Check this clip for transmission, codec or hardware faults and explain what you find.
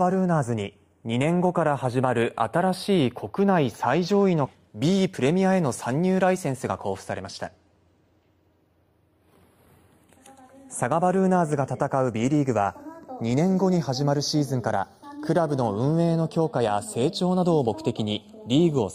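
Two faults show up: a slow stereo drift running through the whole clip, and one jump forward early on.

Channels drifting apart, throughout: the left and right channels sound like they come from devices on separate clocks that disagree by something like 20 ppm. The inter-channel delay creeps to around a third of a millisecond by the end. Fold it to mono and the comb notches that offset creates slide gradually through the spectrum, so you get a slow flanging sweep.

Skip ahead, at 4.45 to 4.56 s: playback leaps forward with essentially no gap. Roughly 0.7 s of audio is simply gone, and the material before and after is butted together almost directly. That fits a chunk being lost in transit or thrown out by an overflowing jitter buffer while later audio was already queued. It comes across as an abrupt lurch, with the timing suddenly pulled ahead.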